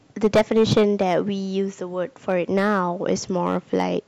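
From start to end, the speech is driven about 10 dB past what a stage in the chain can pass, so hard clipping cuts its peaks flat. Only a small share of samples is affected, roughly 2 percent, yet each flattened top adds high harmonics, heard as crackle on louder syllables.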